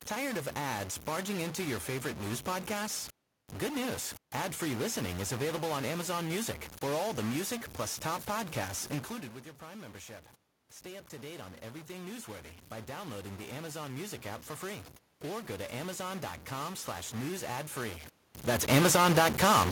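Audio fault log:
throughout, stuck bit: distortion sits on the speech and the pauses fill with noise, likely from one data bit held fixed, offsetting about half the samples.
10.83–18.06 s, automatic gain rising: the input falls about 14 dB, so the gain control slowly adds about 10 dB, and the voice and room noise swell together.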